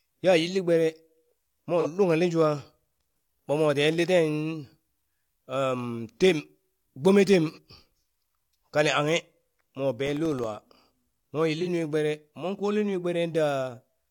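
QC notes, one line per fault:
1.80 to 1.87 s, 7.52 to 7.59 s, 11.62 to 11.68 s, AAC frame loss with concealment: three short smeared, phasey blips in the speech, each about 43 ms long, which fits a single lost frame. The decoder patched each gap from the last good spectrum, so you hear a hazy stand-in rather than a dropout.
10.06 to 10.44 s, processor overload crackle: a gritty burst of crackle riding on the speech for under half a second. The audio path couldn't finish its tiny buffers in time, roughly a millisecond and a half each, and missed a handful. Each one became a hard-edged silent gap, and together they make that tearing sound.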